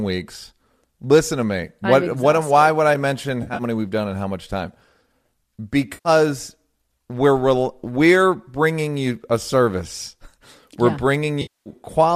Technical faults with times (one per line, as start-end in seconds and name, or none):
3.42-3.62 AAC frame loss with concealment
5.93-6.09 AAC frame loss with concealment
11.41-11.69 AAC frame loss with concealment